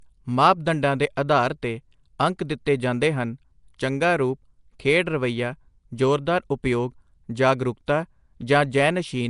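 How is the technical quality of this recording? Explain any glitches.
The technical quality is noticeably degraded, with codec damage throughout and two brief attack smears.

Nellymoser compression, throughout: the speech carries a rough, hissy halo and a smeared, underwater colour, with nothing above 10.6 kHz. The likely cause is Flash's Nellymoser Asao codec, whose fixed two bits per sample starve weak bands and fill them with noise; the damage fits a rate near 44 kbps.

Pre-echo, at 3.78 s, between "ਅੰਕ ਦਿੱਤੇ ਜਾਂਦੇ ਹਨ" and "ਚੰਗਾ ਰੂਪ ਖੇਡ ਰਵੱਈਆ", and again at 7.87 s: a sharp onset landed late in a coding block, so noise sized for the loud part leaked backward about 10 to 11 ms, heard as a short hiss before a softened attack.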